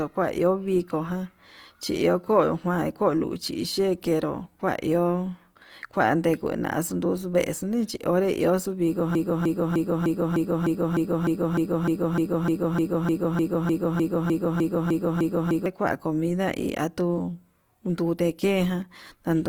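Right from the start and all the way through, the speech has a grainy, rough texture, turning noisy rather than going swirly or hollow. That points to Opus compression, likely in its music-style CELT mode at a low rate, something around 24 kbps. The bandwidth hasn't been narrowed, since content reaches up to about 20.3 kHz, but the encoder is plainly short of bits and is filling bands with noise.

Then at 9.15 s things get stuck. A snippet of about 0.3 s (302.77 ms) repeats back to back, 21 times, until 15.66 s. That's a broken-record loop, likely from the player, encoder or stream stalling and resending the last chunk it had buffered. Everything that should have played in those six and a half seconds is gone, replaced by that stutter.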